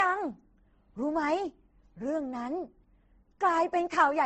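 From start to finish the speech sounds like the product of transcoding between lossy codecs. Nothing is present above about 8.1 kHz, so the top end sounds dull. Two kinds of coding damage sit together. There is a smeared, low-rate quality typical of a speech codec such as Opus at a very low rate. Over it lies a swirly, watery texture of the sort MP3 adds. The likely cause is a low-rate Opus encode later re-encoded to MP3.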